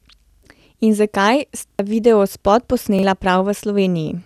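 Speech with repeated buffer stutters at 0.30–0.43 s, 1.71–1.79 s and 2.99–3.03 s, where the same piece of about 43 ms, which fits a 2048-sample buffer, plays again three, two and one extra times with hard joins. Unlike a dropout, there is no gap, only exact identical repeats of the last buffer while new audio arrived late.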